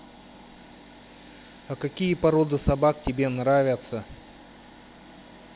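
Nothing stood out on listening to this speech, which sounds like ordinary call audio with nothing above 4 kHz.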